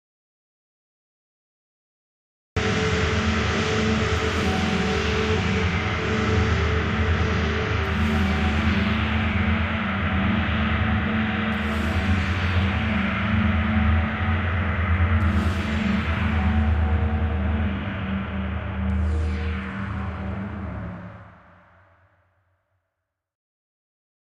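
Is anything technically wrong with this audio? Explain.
Yes. From the very start until 2.57 s there is an audio dropout to silence: the input was likely lost, and silence was written in its place. Unlike a quiet passage or a fade-in, there is no room tone at all, just plain silence before the sound abruptly begins.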